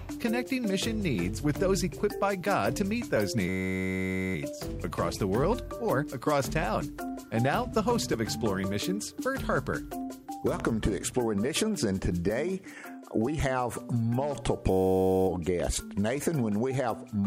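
A system hang loop freezes the audio twice, from 3.49 to 4.35 s and from 14.71 to 15.28 s. Each time a 10.67 ms slice repeats exactly, which fits a 512-sample buffer, producing a steady 93.8 Hz buzz. On a waveform these stretches show an identical short cycle tiled end to end, and on a spectrogram they appear as evenly spaced harmonic stripes. Playback then resumes with essentially nothing missing. There are also two loud pops, a single sharp one at 10.60 to 10.62 s about 10 dB above the signal and a smaller one at 15.60 to 15.62 s about 5 dB above, with the sound continuing underneath both. Each is a tall narrow spike on the waveform and a thin full-height vertical line on the spectrogram, likely from a voltage step such as a switch, static or a driver glitch.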